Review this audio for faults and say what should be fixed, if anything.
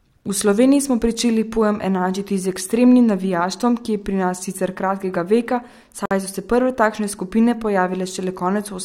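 A gap at a join of encoded pieces opens in the speech from 6.06 to 6.11 s, a silence of about 53 ms between "nas sicer kratkega veka" and "so se prve takšne". Two separately encoded pieces were joined untrimmed, so the encoder's start delay and last-frame padding remain as dead air. Unlike a dropout, nothing is lost: the speech resumes exactly where it stopped, and the edges of the gap are smeared by the codec. To prevent it, trim encoder delay and padding, or encode the material as one continuous file.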